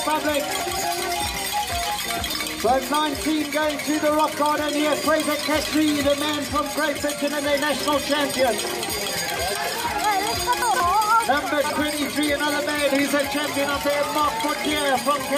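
Four spots where the sound stumbles: 0.6–0.84 s, 2.28–2.4 s, 10.62–10.8 s and 11.64–11.76 s. Each is chunks out of order, with a 60 ms block landing one to three chunks late, so the moment comes out jumbled.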